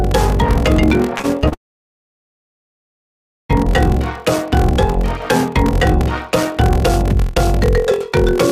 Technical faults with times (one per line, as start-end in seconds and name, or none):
0.00-8.52 block size mismatch (padded)
1.17-1.54 repeated packet loss (robotic sound)
1.54-3.51 long network dropout